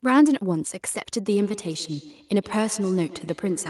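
From 1.29 s to the end of the recording, the speech picks up a faint trailing repeat that comes back at a steady interval of about 150 ms and peaks at about 19 dB below the speech itself. This is feedback echo between two devices: a second device in the same room on the same call plays this microphone's signal aloud, and the microphone captures that playback again. The echo canceller only subtracts its own device's output, so this loop survives.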